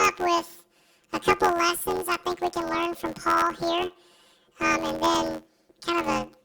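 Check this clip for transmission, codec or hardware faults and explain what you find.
One fault runs through the whole speech clip: planar audio read as interleaved. The stream stores each block as all its left samples followed by all its right samples, but the player reads it as alternating left-right pairs. Each 11.61 ms block therefore plays twice at double speed, first the left half, then the right. That length fits a 512-sample buffer. Because the blocks are so short, there is no clear octave jump. Instead the speech carries a robotic buzz at the 86.1 Hz block rate.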